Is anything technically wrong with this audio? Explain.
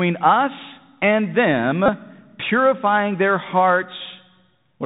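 Yes, two faults are audible in this speech clip.

Throughout, the audio has been through the Bluetooth CVSD headset codec, which fits a 64 kbps link. CVSD encodes one up-or-down bit per sample with an adapting step, and nothing passes above 4 kHz. Loud high sounds overshoot the step and distort, s sounds turn scratchy, and a granular hiss sits under the speech.

From 1.86 to 1.89 s, between "us and" and "purifying their", there is a Bluetooth headset packet repeated fault. Lost voice packets were replaced by decoding the previous packet again for about 22.5 ms, which fits six lost packets. The 3.75 ms repetition produces a brief buzz near 267 Hz.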